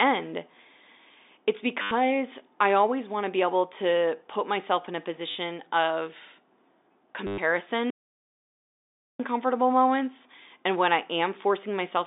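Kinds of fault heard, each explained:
Packet loss with last packet repeated: Three brief robotic stutters, with a buzz of about 100 Hz underneath, at 1.82 s for 90 ms, at 5.31 s for 40 ms just after "put myself in a", and at 7.27 s for 110 ms. The receiver lost a run of packets and kept replaying the last one it had. The 100 Hz buzz fits 10 ms packets.
Audio dropout to silence: At 7.90 s the speech cuts off into dead, total silence with no room tone at all. It lasts about 1.29 s and ends at 9.20 s, where the audio returns mid-flow on "moments and when I". Whatever was said in that gap is gone. The likely cause is the input being lost, through a dropped link, a disconnected device or a mute, while the recorder kept writing silence.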